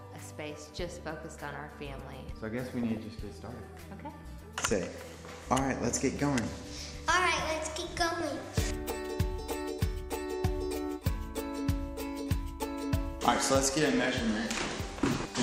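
Weak DAB reception lets bit errors through the error correction into the MP2 audio at 2.83 to 2.97 s, pointing to a bit error rate around half a percent. Corrupted samples put short blips of noise in single sub-bands, producing DAB burbling.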